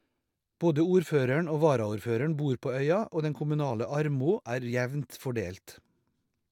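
No technical faults can be heard anywhere in the speech.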